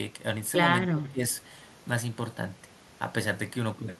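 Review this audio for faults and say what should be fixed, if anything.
Speech suppressed in double talk, 0.91 to 1.23 s: speech drops by about 20 dB, likely an echo canceller muting both talkers during overlap. Tune the echo canceller's double-talk detection so near-end speech passes through while the far side is active.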